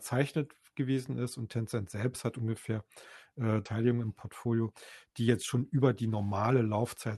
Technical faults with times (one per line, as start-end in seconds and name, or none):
3.65-3.67 skip ahead
3.77-6.17 jitter buffer speed-up